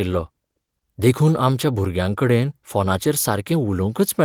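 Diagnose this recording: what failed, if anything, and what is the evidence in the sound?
Nothing here has failed: the speech comes through as it should, and the 24 kbps Opus hybrid coding leaves it full-band, with content reaching up to about 20.4 kHz.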